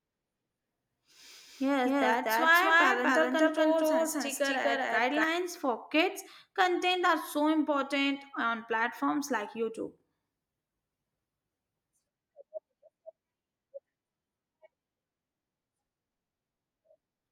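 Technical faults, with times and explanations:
0.0–5.24 s, doubled audio track: From the start, the speech is heard twice. A dry, full-band copy trails about 200 ms behind at roughly equal level. It stops abruptly just before "for kids content are". A slower second capture path is the likely cause.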